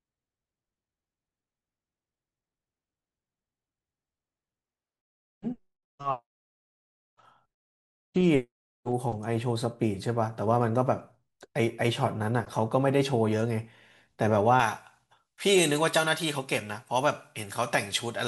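Pre-emphasis was left on from 14.6 s to the end: the treble boost was never undone, lifting 10 kHz about 11 dB and leaving speech thin, bright and sibilant.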